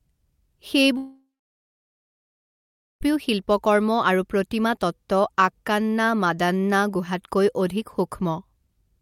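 A long network dropout runs from 0.97 to 3.03 s in this speech clip. The last sound is stretched into a fading buzz, then about 1.75 s of silence follows, and speech resumes with roughly 2 s of audio gone, likely lost packets in transmission.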